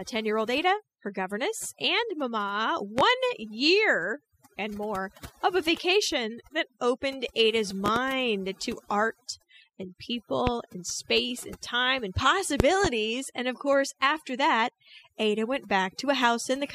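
Overdone noise removal runs through the whole speech clip: bands near the noise estimate were pushed to near silence, leaving twinkling specks between phrases. A spectrogram shows scattered isolated dots and a patchy, gappy speech texture.

Loud pops follow: single pops at 2.99 to 3.02 s and 10.47 to 10.51 s, and double pops at 7.86 to 8.00 s and 12.60 to 12.88 s. They peak roughly 15 to 20 dB above the speech and appear as tall vertical spikes and full-height spectrogram stripes. The likely cause is a voltage step from a plug, switch or static.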